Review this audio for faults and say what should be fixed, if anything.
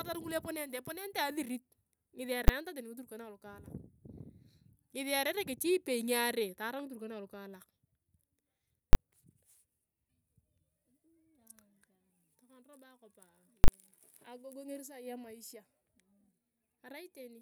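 Invalid numbers at full scale occur at 2.48 s (10 ms), 8.93–8.95 s (20 ms) and 13.64–13.68 s (40 ms). Infinite or invalid results were clamped to maximum amplitude, producing loud bangs. Prevention: detect and replace non-finite values before output.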